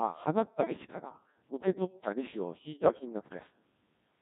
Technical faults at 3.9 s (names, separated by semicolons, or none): Codec 2 vocoder